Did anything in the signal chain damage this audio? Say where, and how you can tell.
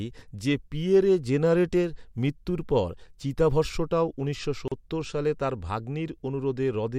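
Yes, at the codec or storage stage there's a gap at a join of encoded pieces: about 37 ms of silence from 4.68 to 4.72 s, right after "মৃত্যুর পর চিতাভস্মটাও উনিশশো", with speech resuming where it stopped at "সালে তার". Separately encoded chunks were butted together untrimmed, leaving encoder delay and last-frame padding in.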